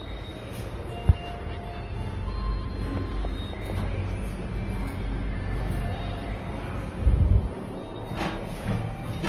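Throughout the clip the sound carries two layers of coding damage, their different artefacts heard together. This is transcoding between lossy codecs, likely a WMA encode near 64 kbit/s re-encoded to Opus near 24 kbit/s, which spends its bits on the earlier artefacts.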